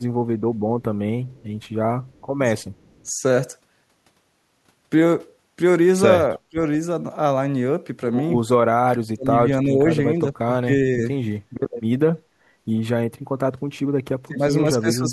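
Speech with two problems. From 0.56 to 3.08 s there's an echo leak: a very faint copy trails the talker by 320 ms, likely a far-end speakerphone's canceller letting some through. At 6.36–6.57 s, 8.9–11.05 s and 14.26–15.12 s the voice drops out deeply in patches, likely speech suppressed in double talk when both sides spoke together.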